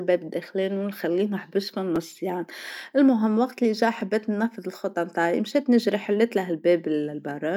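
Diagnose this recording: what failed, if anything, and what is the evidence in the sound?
Twice the driver or buffer stage missed its deadline and replayed the previous buffer, a repeated buffer fault. At 1.96 s and 4.01 s the speech clicks as a 5.33 ms slice plays a second time, which fits a 256-sample buffer, dropping a few milliseconds each time.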